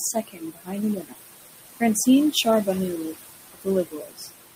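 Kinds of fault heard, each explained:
Noise suppressor artifacts: the suppressor pulls down the bands it judges to be steady noise by about 18 dB. The room noise, sitting about 11 dB under the speech, sinks in pauses and swells beneath the talking.
Speech cut by the noise suppressor: here the suppressor mistakes parts of the speech itself for noise, so stretches at 0.13–0.74, 0.95–1.21, 3.53–3.67 and 3.85–4.31 s drop by about 17 to 21 dB and sound swallowed.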